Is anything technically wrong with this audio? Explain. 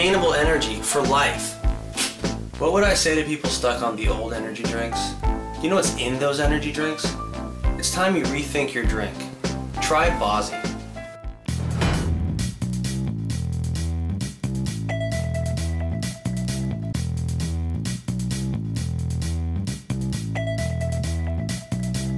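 Yes. Throughout the clip, the resampler is restarted on every block. Each 50 ms block is converted from 48 kHz to 24 kHz in isolation, so every edge gets a small error. The result is a steady 20 Hz ticking, present only while there is sound.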